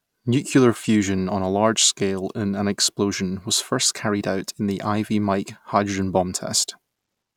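No technical faults are audible.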